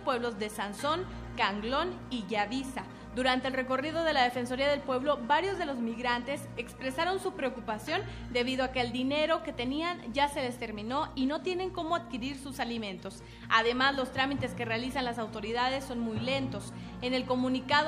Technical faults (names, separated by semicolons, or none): none